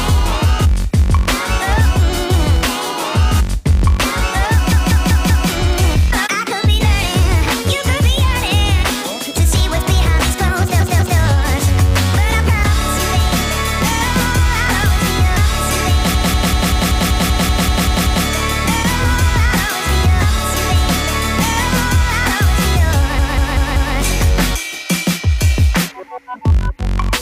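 A block of compressed frames was sent or written more than once, so the decoder plays the same 0.19 s of sound again, a length that fits a run of six frames. These repeated frames are heard as a stutter at 4.72 s (four extra plays, adding 0.77 s), 10.80 s (two extra, 0.38 s), 16.14 s (eleven extra, 2.11 s) and 23.18 s (four extra, 0.77 s). Each time, the same fragment loops and the audio grows longer by the repeated time.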